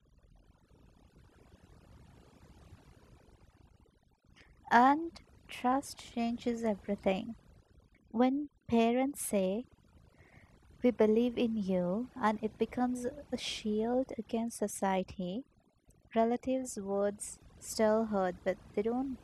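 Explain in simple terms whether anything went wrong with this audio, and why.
Something did go wrong: the whole recording, from start to finish, suffers from overdone noise removal. A noise reduction tool was pushed too hard on a noisy original. It works band by band, and any band that sounded close to the background noise got pulled down or switched off, taking the softer parts of the speech with it. That leaves a lowered background that breaks up into twinkling, warbling specks.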